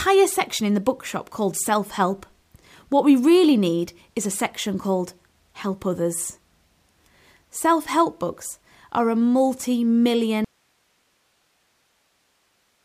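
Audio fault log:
10.45 s to end: audio dropout to a faint residue. The speech cuts off abruptly and never returns, leaving only hiss roughly 45 dB below the signal, likely because the source was lost while the path stayed live. The waveform collapses to a thin noise band; the spectrogram shows harmonics ending sharply over flat broadband grey.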